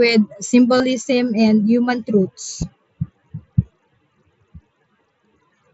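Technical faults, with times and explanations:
0.78–0.80 s and 2.62 s, concealed Bluetooth headset packet loss: the phone filled lost headset packets by repeating recent waveform, giving a brief buzzy hold at 0.78 s; the shorter 2.62 s gap is nearly hidden.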